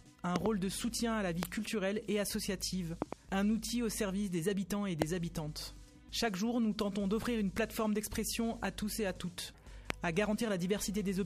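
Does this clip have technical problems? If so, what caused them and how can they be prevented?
Yes, loud pops occur at 0.36–0.48 s and 3.02–3.15 s (each a double pop) and at 1.43–1.45, 5.02–5.04 and 9.90–9.92 s. Each peaks about 20 to 25 dB above the sound and is likely a voltage pulse from static, a switch or a plug. Unlike a dropout, the sound continues underneath. Secure cables and ground the equipment to prevent it.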